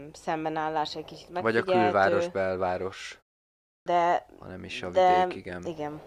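At 3.47 s, after a pause of about 0.33 s, the speech comes back with a clipped start after a pause. The output path dropped into a low-power state during the gap and needed time to wake, so roughly 0.39 s of sound, up to 3.86 s, never reaches the listener. The speech resumes abruptly, with its opening sounds missing. On a waveform or spectrogram, the silence runs straight into full-level energy with no onset.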